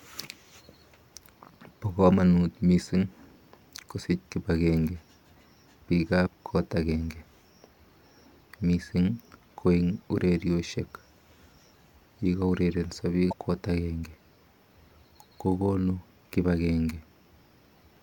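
At 6.23 to 6.28 s and again at 13.29 to 13.33 s, just before "kot akenge", there is damaged data in the compressed stream. The decoder misreads corrupted frames, loses sync and hunts for the next header. Each one is brief, about 0.05 s.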